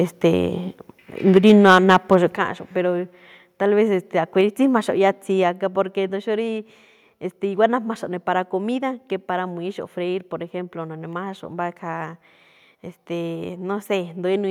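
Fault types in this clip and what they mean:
Microphone overload: The input gain was likely set too high for the loudest moments, so the converter ran out of headroom and flattened the tops of the waveform. Between 1.36 and 1.97 s the speech peaks push about 4 dB past the converter's limit, and a few percent of the samples in that stretch are squared off. The clipped peaks come through with a harsh, crackly, buzzing edge on the loudest syllables.
Microphone volume stepped down: The call software likely detected the hot, clipping input and lowered the device's microphone gain in single steps rather than smoothly. Speech and background drop together at once: about 2 dB at 1.37 s, just as the overload begins, then a larger cut of about 6 dB at 2.37 s, and another of about 2 dB at 5.43 s, just before "a̱ga porque". Each one is heard as a sudden, stepwise fall in loudness.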